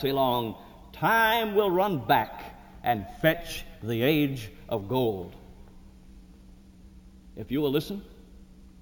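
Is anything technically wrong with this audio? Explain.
Yes, there's imaging from sample-and-hold upsampling running through the whole clip. The sound was brought up from 16 kHz to 48 kHz by just repeating each sample, with no smoothing filter after. That leaves mirrored copies of the spectrum, the first sitting between 8 and 16 kHz at about 20 dB below the signal. You hear it as a bright, metallic fizz that rises and falls with the sound, and the lowest copy moves opposite to the pitch.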